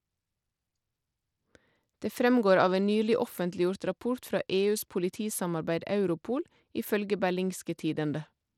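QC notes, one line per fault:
throughout: Bluetooth SBC compression, likely. The speech has a clearly gritty, unsteady top end, which fits upper sub-bands starved of bits at roughly 96 kbps.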